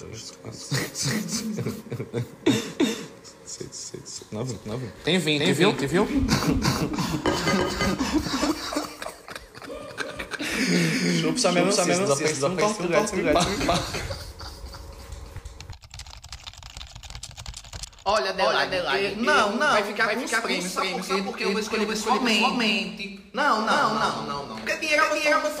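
Throughout, a doubled audio track: an equally loud copy trails roughly a third of a second behind, undecayed unlike echo, likely from a second capture.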